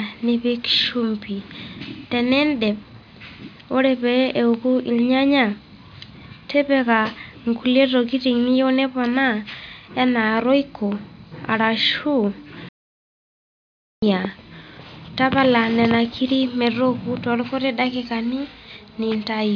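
No technical faults can be heard anywhere in this recording.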